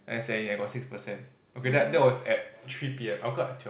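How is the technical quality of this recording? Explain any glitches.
No glitches can be heard: the speech arrives as an ordinary call-path signal, its bandwidth ending at 4 kHz in a way that fits a G.711 A-law link at 64 kbps.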